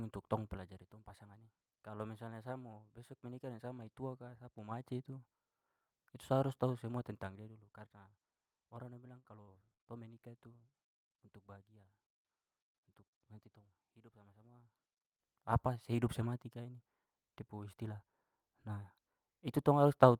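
Zipper noise runs from 0.51 to 0.94 s and again from 4.52 to 4.95 s in this speech clip. Each time the level moves in audible 3 dB steps, falling by roughly 10 dB in the first stretch and rising by about the same in the second, at around seven steps a second. Because each jump lands without any smoothing, it leaves a small click, and the clicks string together into a ticking that rides on the voice while the level travels. Repeated packet loss gives a robotic sound from 9.19 to 9.82 s. Four short holes open in quick succession, the longest 59 ms, and each is patched by stretching the last bit of sound. About a quarter of that span is filled this way, which makes it choppy with pieces missing.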